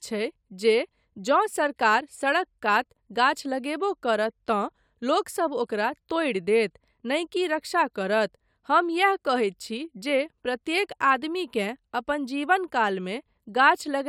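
No technical faults can be heard anywhere in the speech recording. Nothing in the audio calls for a time stamp or a closer look.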